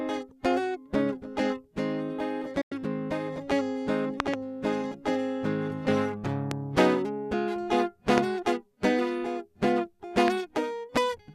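At 2.61 s a digital broadcast dropout mutes the music for about 0.1 s after a quick 8 ms fade, consistent with four failed frames. Loud pops, likely voltage spikes, follow: a double pop at 4.20–4.36 s, then sharp single pops at 6.51, 8.18 and 10.28 s, roughly 20 dB above the music.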